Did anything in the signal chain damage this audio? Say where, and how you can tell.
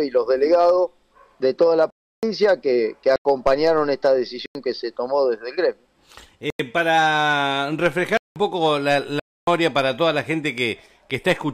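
Yes, there are blocks of digital silence, a driver or buffer fault on the playback or capture path. The sound cuts out to silence with hard edges at 1.90–2.23 s (325 ms), 3.16, 4.46 and 6.50 s (93 ms each), 8.17–8.36 s (186 ms) and 9.20–9.47 s (279 ms). The repeated 93 ms and 186 ms gaps fit whole 4096-sample buffers being missed, so the program was not refilling the output in time.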